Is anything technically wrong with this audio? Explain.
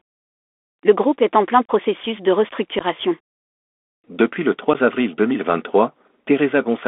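Yes, two faults can be heard. Throughout, the speech carries the sound of a Bluetooth CVSD headset codec. The line is held to roughly 250 Hz to 3.5 kHz, which fits a 64 kbps CVSD link. The codec encodes one bit per sample, rising or falling by an adaptive step. Bright, loud moments outrun that step, so sibilants turn scratchy and a fine granular hiss sits under the speech. On a spectrogram, nothing appears above 3.5 kHz and a grainy noise floor fills the band.

There is also unconcealed Bluetooth headset packet loss. Audio simply vanishes from 1.66 to 1.71 s, right after "groupe est en plein". That is about 34 ms missing, which points to roughly ten lost packets. Shorter holes follow at 2.79 to 2.83 s (15 ms) and 4.74 to 4.76 s (about 11 ms), each a few packets. Nothing fills these gaps, so each has abrupt edges. A waveform shows flat notches with vertical walls, and a spectrogram shows thin blank columns.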